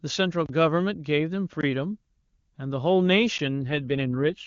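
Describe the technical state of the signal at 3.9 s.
At 3.9 s the speech sounds rougher and more synthetic, with no gap and no loss of bandwidth. This is an AMR rate drop, running from 3.62 s to the end of the clip, where the codec falls back to fewer bits and more error protection, consistent with a step from 23.85 to 8.85 kbit/s.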